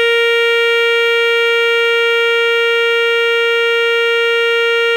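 Nothing technically wrong turns up in this short music clip; there's no fault to point to anywhere in it.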